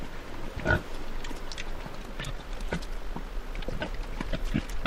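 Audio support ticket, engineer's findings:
Time-stretched section, 1.97 s to end at 4.86 s: abrupt jump to about 1.93x pace, rushed, pitch unchanged. Likely a stretch-to-fit step in software dropping short slices. Unlike a resample speed-up, no upward pitch shift.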